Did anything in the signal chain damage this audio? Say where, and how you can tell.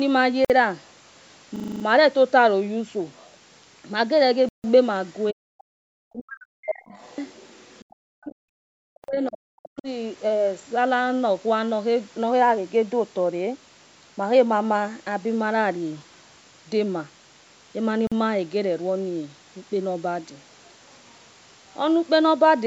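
Yes. In the Bluetooth link's playback stage, the sound drops to clean silence at 0.45 s (about 51 ms), 4.49–4.64 s, 9.04 s (about 43 ms) and 18.07 s (about 45 ms), then resumes. A Bluetooth stall is the likely cause: the headphone buffer emptied while retransmissions were pending. Unlike a hang, nothing repeats.

At the driver or buffer stage, from 1.56 to 1.84 s, a 40 ms slice repeats exactly seven times, giving a rough 25 Hz stutter. This is a system hang loop: the hardware kept replaying its ring buffer while the host froze. Because the audio repeats rather than going silent, it is not a dropout, and little or nothing appears to be lost.

In the call processing, the talker's speech is pulled down steeply, by something like 40 dB at its deepest, at 5.31–5.49 s, 6.08–6.95 s and 8.06–9.89 s. The likely cause is speech suppressed in double talk: the echo canceller confused near speech with loudspeaker echo. 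These are level dips, not the clean gaps of a stall.

Also in the call processing, from 6.92 to 7.85 s, a faint second voice, roughly 30 dB below the talker, comes through right as the suppression ends. The likely cause is the other side's voice leaking through as residual echo. This adds a sound rather than removing one, which separates it from the suppression around it.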